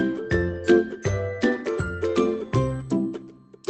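Nothing stood out on listening, and there's no technical problem to point to anywhere in the audio.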